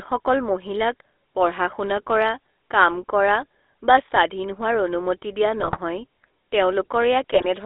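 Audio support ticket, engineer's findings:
Buzzy, gravelly roughness throughout, band limited to roughly 300 Hz to 3.6 kHz. GSM full-rate codec: pulse-excited vocal-tract model, consistent with 13 kbps coding.

Squawks and gargling at 5.60–5.78 s and 7.33–7.47 s. GSM bit errors: corrupted filter, pitch and gain parameters distorting several consecutive frames.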